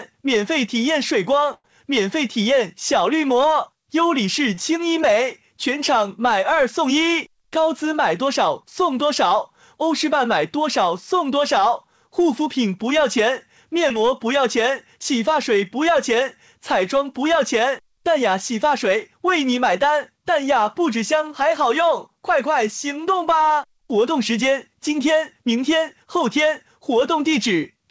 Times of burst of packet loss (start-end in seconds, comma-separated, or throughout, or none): 1.54-1.66